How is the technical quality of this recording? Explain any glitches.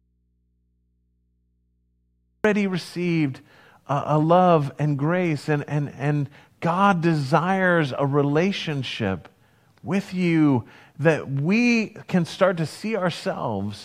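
The recording has one glitch, at the very start. From 0 to 2.44 s there is an audio dropout to a faint residue. The signal path likely lost its source while the input stayed live, leaving only hum about 45 dB down until speech returns abruptly at "received a a love".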